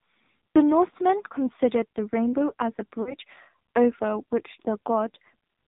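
From the start the speech sounds boxed-in and buzzy, with nothing above 4 kHz and a synthetic, reedy edge on every syllable. This is the AMR narrowband mobile codec applied heavily. The speech is rebuilt from a vocal-tract model driven by sparse pulses, and the coarseness points to one of the low AMR-NB modes, around 6 kbps, where too few bits remain to carry natural detail.

At 0.54 s a brief dip and warble interrupts the sound. At 3.02 s there is a longer smeared, fading stretch lasting until about 3.15 s, just before "over which", and the speech resumes rough for a moment. These are lost AMR speech frames. At the first point about 20 ms went missing. At the second about 40 ms went missing, which fits two consecutive frames. The decoder bridged each gap by repeating its last good pitch and vocal-tract settings at falling gain.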